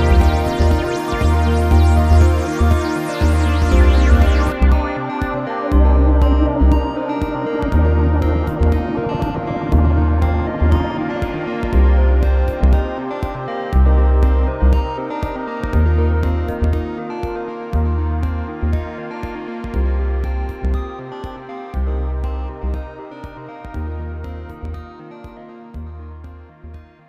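The clip opens with a doubled audio track that is already running at 0 s and lasts until 4.52 s. A second, full-band copy of the sound trails the original by about a second and a half. It is roughly as loud as the original. It carries no decay or room colour of its own. At 4.52 s the copy cuts off abruptly. The likely cause is the same signal being captured twice, once through a slower path.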